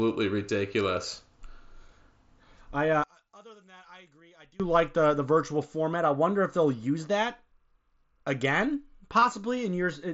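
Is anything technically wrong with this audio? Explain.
Yes, there are two kinds of problem in this speech clip, both riding on an mSBC headset link that's otherwise carrying the sound up to 8 kHz.

Concealed Bluetooth headset packet loss hits at 1.17 s and again from 9.20 to 9.22 s. The receiver patched each gap by repeating a close match of the preceding waveform. The first, about 7.5 ms, is basically invisible. The second, about 22.5 ms, which fits a run of a few lost frames, leaves a brief buzzy hold and a small warble.

Between 3.04 and 4.60 s, right after "I uh" and before "like the the virtual", the level drops by about 29 dB and the voice goes faint. That's likely one channel inverted: summed to mono, the common centre content cancels and only the difference remains.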